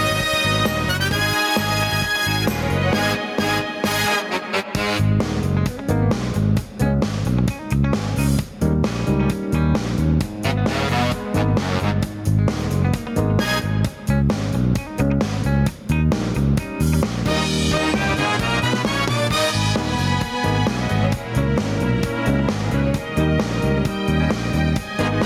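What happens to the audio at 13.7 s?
At 13.7 s the clip is in the middle of gain pumping that runs throughout: the gain swings by roughly 10 dB, pulling loud and soft parts closer in level so the sound is squashed. The likely cause is excess input gain driving a fast limiter. On a waveform the envelope looks flattened.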